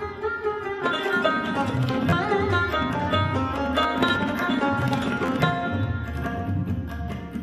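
At 2.10 to 2.13 s, 3.83 s and 5.26 to 5.28 s there is a repeated buffer: fresh audio arrived late, so the device replayed its last block, a piece about 11.6 ms long, which fits a 512-sample buffer. It repeats twice at the first and last points and once at the middle one, each with a hard join, giving a brief buzzy click. Unlike a dropout, there is no silence, only the same fragment repeated, displacing around 20, 10 and 20 ms of audio.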